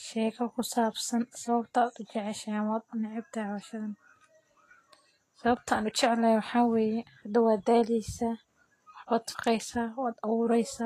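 Vorbis compression runs throughout the speech. Nothing remains above 14.2 kHz, and the treble sounds hissy and grainy, with roughened tones and blurred attacks. The likely cause is low-quality Vorbis coding, fitting roughly 32 kbps, quantising fine treble detail into similar-energy noise.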